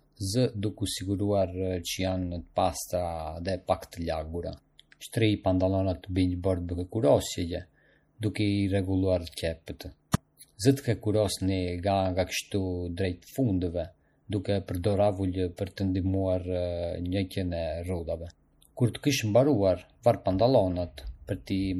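Throughout the speech there is plainly audible codec damage, most likely from MP3 compression at a low bitrate, with the sound pointing to roughly 48 kbps. Too few bits forced the encoder to drop weak frequency lines frame by frame, so the audio sounds watery and swirly, with chirpy sibilants and smeared onsets. A spectrogram would show speckled holes that flicker on and off.

Pre-echo appears at 10.12 s, just after "rregulluar qepjet", and again at 15.57 s. In each case a sharp attack landed late in a transform block, and the quantisation noise sized for the loud attack spilled into the quiet moment before it. This produces a short hiss about 17 to 18 ms ahead of each attack, and the attack itself sounds softened. On a spectrogram this shows as a brief broadband smear just before the onset, and a waveform shows low-level noise rising ahead of the transient.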